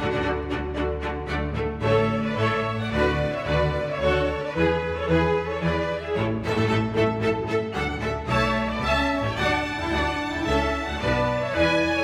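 No technical faults are audible.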